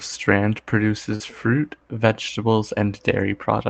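At about 1.15 s the speech briefly smears into a short wobble, lasting until about 1.22 s, as a short concealed packet loss. Roughly 40 ms of audio arrived too late to decode, so the receiver extrapolated the preceding sound across the gap before blending back into the real signal.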